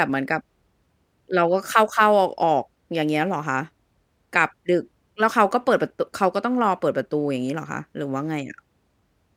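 No technical faults can be heard anywhere in this speech recording. The sound runs on evenly, with no moment that stands out as going wrong.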